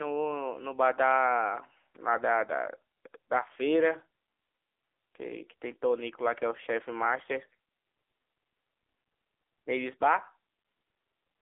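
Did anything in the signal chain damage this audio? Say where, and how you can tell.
Yes, at the codec stage, throughout the speech. It is the AMR narrowband mobile codec. Nothing passes above 3.7 kHz, and the band sits near 300 Hz to 3.6 kHz. The buzzy, synthetic texture fits a low bitrate near 8 kbps, where too few pulses per frame describe the voice.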